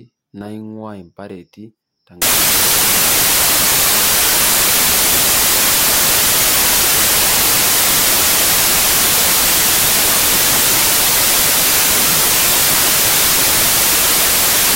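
From 2.22 s to the end, samples built from the wrong bytes scramble each value into loud, harsh broadband noise, close to white on the louder speech.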